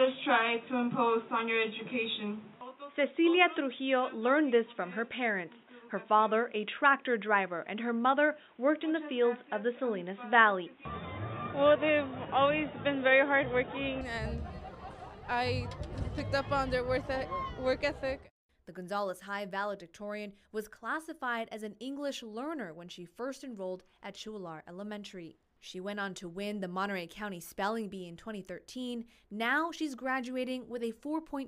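From 0.0 to 14.01 s the input was likely switched to a poorer device, which passes nothing above 3.8 kHz. That stretch sounds dull and boxy, differs in level by roughly 5 dB, and carries its own faint background noise. At 14.01 s the sound clears up with no gap.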